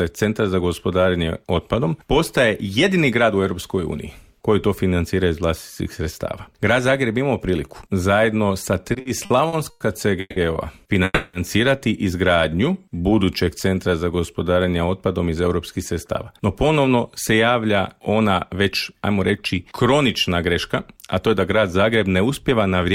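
From 8.83 to 9.82 s there are repeated stalls (stutter). Eight times the jitter buffer ran dry and the receiver held the last sound, filling 270 ms in all, about 27% of that stretch, with the longest hold at 100 ms. Nothing is lost, but the sound drags in a choppy, start-stop way. These are many brief holds, unlike a single freeze.

At 10.20 to 10.38 s and again at 11.04 to 11.35 s there is a call audio freeze. The sound hangs as a fading continuation for 160 ms and then 290 ms, dropping briefly to silence before it resumes where it stopped, so the delay grows by those amounts. The likely cause is packets held up on the way, emptying the buffer. Each is one sustained hang rather than a rapid stutter.

From 12.50 to 14.54 s a jitter buffer slow-down plays the audio at 90% speed. Repeated pitch periods add 219 ms to rebuild the reserve, so sounds stretch out while the pitch stays put. That unchanged pitch rules out tape-like drag.

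A jitter buffer speed-up runs from 16.25 to 18.53 s at 106%, trimming about 150 ms, and from 18.93 to 22.92 s at 107%, trimming about 300 ms. Short pitch-period cuts shed excess delay, so the audio sounds hurried at the same pitch.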